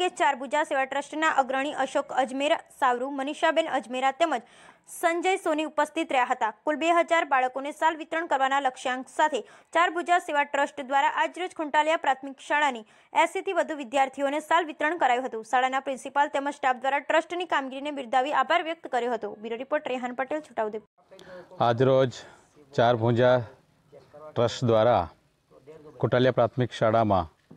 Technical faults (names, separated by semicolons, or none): none